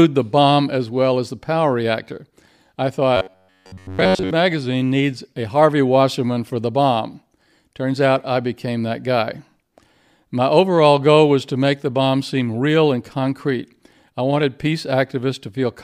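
Right after "the power reactor I", from about 3.17 s to 4.31 s, the speech collapses into robotic sound from repeated short buffers. The voice becomes a stiff, metallic buzz pinned at about 93.8 Hz. It still loosely tracks the words, but for that whole stretch it's essentially all repeats. The likely cause is audio arriving too slowly, so the playback side keeps looping a chunk of roughly 10.7 ms, and the real speech underneath gets skipped.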